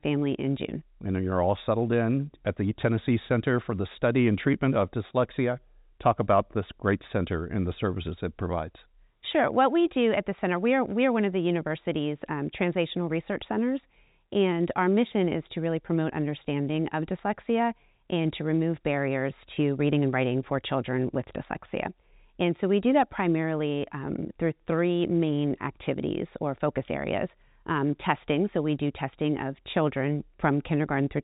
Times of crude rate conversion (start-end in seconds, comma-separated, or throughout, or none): none